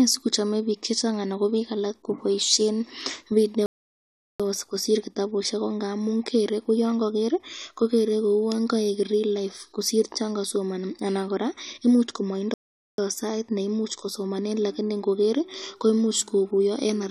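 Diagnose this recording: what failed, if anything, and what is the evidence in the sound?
The fault sits at the playback stage: two playback stalls. The speech cuts to silence from 3.66 to 4.40 s, about 0.74 s, then resumes with "kosir kitabusyek ko ngamun". It stops again after "anan koraa koimuch", from 12.54 to 12.98 s, about 0.44 s, and picks up with "sait neimuchi kosomanen lakini". Each gap is dead silence in mid-flow. The likely cause is the player running out of buffered data or its thread being blocked, so output halted until it recovered.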